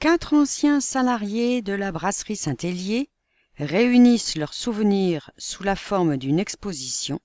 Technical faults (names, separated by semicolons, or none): none